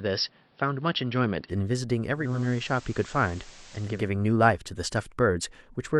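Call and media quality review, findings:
Dull, boxy start, 0.0–1.5 s: level about 5 dB lower, fresh noise floor roughly 35 dB under signal, no gap at switch. Likely input switched to a poorer device, narrower-band mic path with its own tone and noise.

Hiss rising 2.13–4.13 s, roughly 25 dB under signal; level about 1 dB down, 395 ms crossfades. Digital radio blending to analogue: lost digital stream, receiver faded to FM simulcast and back.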